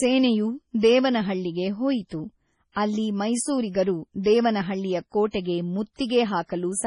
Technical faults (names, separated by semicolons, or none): MP3 compression; pre-echo